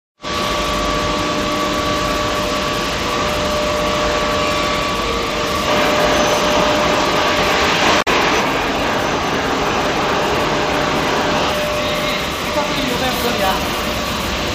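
At 8.01 to 8.08 s there is damaged data in the compressed stream. For about 70 ms the encoded bytes are wrong. The decoder misreads those frames and loses sync, then hunts for the next valid frame header. The result is a brief blip.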